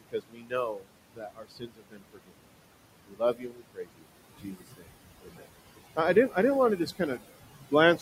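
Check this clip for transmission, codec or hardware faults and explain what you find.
Two faults stand out, both from a noise suppressor in the chain rather than from the codec or transmission link.

Noise suppressor artifacts run through the whole clip. The suppressor pulls the room noise, which sits about 12 dB under the speech, down by about 21 dB in the gaps, so the background pumps up beneath speech and drops away between phrases. This gating tied to the speech sets it apart from a steady noise floor.

Speech cut by the noise suppressor appears from 0.0 to 2.41 s and from 3.07 to 5.49 s, just before "I didn't". In each stretch roughly a second and a half of quiet speech is pulled down by up to about 22 dB. Shorter cuts follow from 6.77 to 7.23 s, after "didn't want to", at about 17 dB, and from 7.65 s to the end, at about 16 dB. Soft consonants and trailing sounds come out swallowed. 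Unlike a dropout, the sound fades rather than vanishing abruptly.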